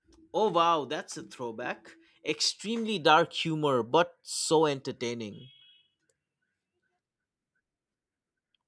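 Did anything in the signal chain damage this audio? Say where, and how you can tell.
No, nothing in this speech recording points to damage at any stage of the signal chain.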